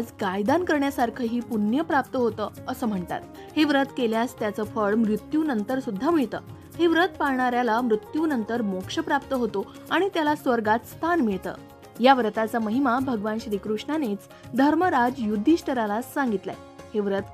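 No technical faults can be heard anywhere in the recording. Nothing in it breaks, drops out or distorts at any point.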